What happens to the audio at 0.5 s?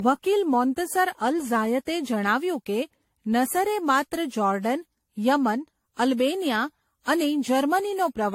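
At 0.5 s, as across the whole clip, the speech carries generation loss, most likely from being decoded and re-encoded around seven times through a lossy AAC chain that fits 64 kbit/s. Each pass requantises on a shifted frame grid, so noise and spectral holes stack up. The result sounds swirly, smeared and hollow beyond what that bitrate alone would give, consonant attacks are blurred, and nothing remains above 16.5 kHz.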